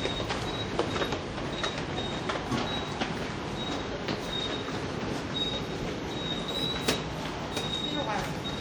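Sharp loud pops sit on top of the sound at 4.11–4.15 s and 5.83–5.87 s, then a double pop at 8.02–8.24 s, peaking roughly 10 to 15 dB above it. These are likely sudden voltage pulses from a plug, switch or static.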